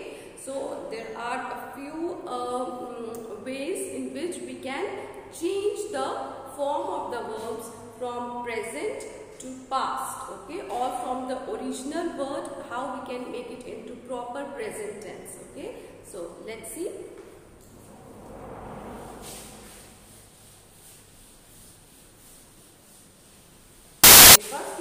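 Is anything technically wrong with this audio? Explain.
Yes. From 24.04 to 24.36 s, samples are built from the wrong bytes: the reader assembles each sample's bytes out of order, whether shifted by one byte, swapped, or misaligned. The rapidly changing low-order bits end up as the most significant part of every value. For about a third of a second, the sound is replaced by loud, harsh broadband noise.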